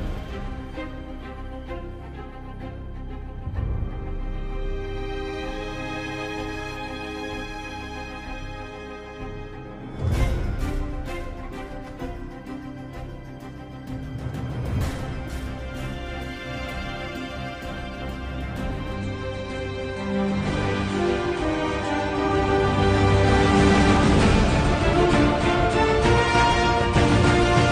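At 18.95 s the audio switches abruptly, with no gap, to a degraded version that lasts to the end at 27.72 s. This is an adaptive stream at a lower bitrate: the player dropped to a cheaper encoding when throughput fell. Nothing above 9.6 kHz survives, so the treble goes dull and coding artefacts rise. The change points to a step from around 96 kbit/s to 32 kbit/s AAC.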